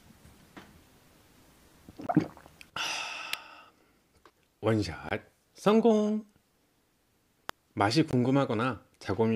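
At 2.07 s there's the first gap between chunks: a hard-edged hole of about 21 ms where silence is left at a join. It comes back at 5.09 s and 8.11 s, so the sound is arriving in 3-second blocks. Between those, at 3.33 s and again at 7.49 s, there's a sharp snap sitting on top of the audio, most likely an electrical switching spike from nearby gear.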